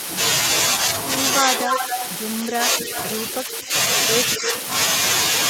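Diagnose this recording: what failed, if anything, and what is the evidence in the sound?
Call processing is where this fails. Speech suppressed in double talk shows as four dips: 1.42–1.81 s and 2.49–2.96 s, each about 5 dB down, then 3.45–3.73 s and 4.37–4.48 s, each about 10 dB down, and each lasting a fraction of a second. The likely cause is an echo canceller that could not tell the near talker from loudspeaker echo and ducked everything. Unlike a network dropout, the voice sags instead of clicking, and it happens only where the two sides overlap.

The second fault, also in call processing, is echo leak. A discrete repeat of the voice trails it by a steady 244–248 ms. At 1.65–2.08 s it is about as loud as the speech itself, and it comes back fainter at 2.94–3.01 s (about 15 dB down), 3.33–3.58 s (about 20 dB down) and 4.35–4.61 s (about 10 dB down). The likely cause is a far-end loudspeaker pickup that the canceller did not fully remove. 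It is not room reverberation, because the copy sits at a fixed quarter-second delay rather than decaying smoothly.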